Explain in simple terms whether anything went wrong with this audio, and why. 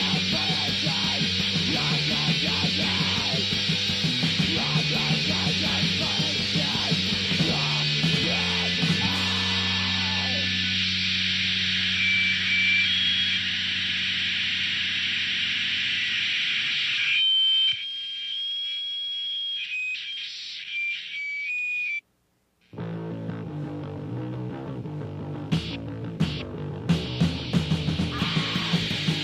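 Nothing went wrong with this audio that a listener can pick out. No moment stands out as a problem, so there is nothing here that needs explaining.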